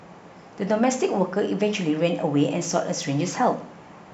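A speech clip with clock slip clicks running almost the whole way through, from about 0.12 s to 4.13 s. There's a faint, regular tick roughly every 30 ms, so with well over a hundred of them it blurs into a soft rattle, most obvious on the louder, sustained stretches of voice. Each one is a single sample dropped or repeated, which likely comes from two devices running on independent clocks about 0.1 percent apart.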